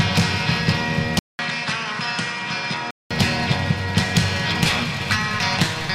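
At 1.19 s the audio drops out for about 200 ms. It then returns duller and a few decibels quieter, with nothing above about 10.7 kHz. A faint new hiss sits well below the signal. The full, brighter sound comes back at 3.11 s. This points to an input switched to a poorer device. The system likely moved to a narrower-band microphone partway through, bringing its own tone, level and noise.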